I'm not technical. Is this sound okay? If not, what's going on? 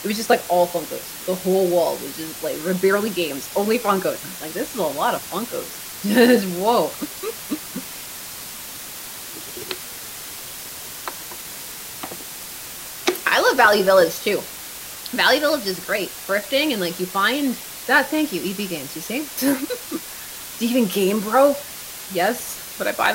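No. There's a steady, even hiss running from start to finish, fairly loud next to the sound itself. That's low bit depth with dither: the audio was stored with very little detail, which fits about 6 bits, and the rounding error became constant noise instead of harsh distortion.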